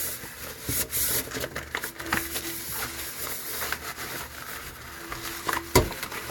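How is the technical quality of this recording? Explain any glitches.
Listening closely to these everyday sounds, nothing stood out as a technical problem at any point.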